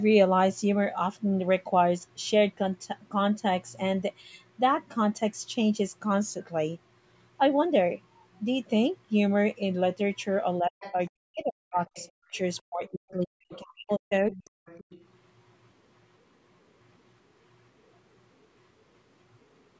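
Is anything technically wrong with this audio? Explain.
Yes. Two related faults appear in the middle of this speech clip, and both are likely caused by the call's echo cancellation.

Speech suppressed in double talk occurs between 10.62 and 14.51 s. About two seconds of that stretch are affected. Both ends of the call seem to be talking at once. The echo canceller likely could not tell the local talker from the loudspeaker echo, so it turned everything down. The voice dips, thins and drops out in pieces. At its deepest, it falls by about 40 dB.

The other side's voice leaking through appears in four places. These are 10.8 to 11.09 s, 11.87 to 13.12 s, 13.54 to 13.59 s, and 14.31 to 15.0 s. The far talker is played on a loudspeaker near the microphone. The canceller likely failed to remove all of it. A second, fainter voice comes through in scraps. It sits roughly 15 to 25 dB below the main speech. 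The call's microphone processing, which leaves nothing above 8 kHz, is not itself a fault.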